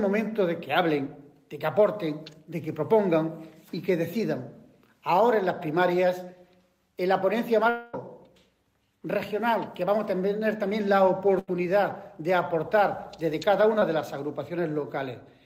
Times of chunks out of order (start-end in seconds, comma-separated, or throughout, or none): none